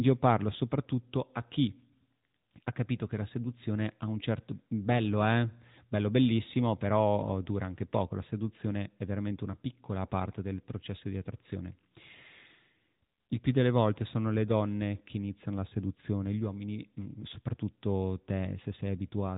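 From start to finish the speech carries the AMR narrowband mobile codec's sound: nothing above about 3.8 kHz, and a buzzy, synthetic edge from pulse-driven vocal-tract modelling, fitting a mid-rate mode near 10 kbps. Unlike a plain low-pass filter, the damage is plainly audible coding grit, not just muffling.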